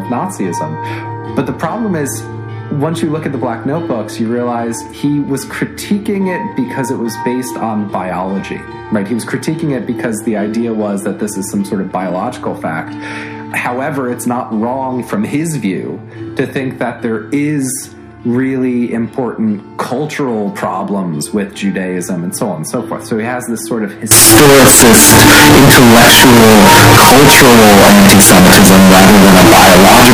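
From 24.11 s to the end at 30.13 s, the audio turns abruptly into a very loud, harsh, buzzy roar, with the waveform flattened into a near-square shape at an almost fixed, high level and the background noise pushed up to the same level as the main sound. This is float read as integer: the likely cause is 32-bit floating-point samples being read as 32-bit integers, so the sign and exponent bits, rather than the true amplitude, now dictate each sample's level.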